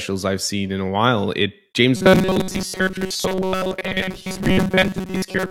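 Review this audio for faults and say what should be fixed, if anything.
From 1.97 s to the end, robotic sound from repeated short buffers: a rigid 188 Hz buzz, likely from about 5.3 ms buffers replayed while real audio was skipped. Enlarge the receive buffer so fresh audio always arrives in time.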